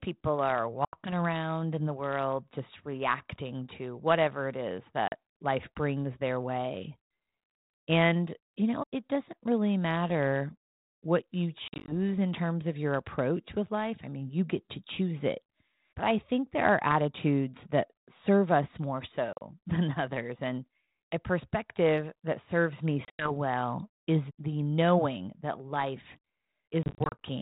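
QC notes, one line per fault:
0.85–1.14 s, 5.08–5.13 s, 11.68–11.92 s, 19.33–19.41 s, 23.05–23.32 s, 26.83–27.19 s, packet loss on an ADPCM call: hard-edged holes of 40 to 180 ms, some scattered in bursts, the longest run 90 ms near 23.1 s. Each is followed by brief distortion, at times with a click or a wrong level, that settles within tens of milliseconds. Lost packets were filled with silence, leaving the 32 kbit/s G.726 decoder's predictor and step size out of step with the sender's.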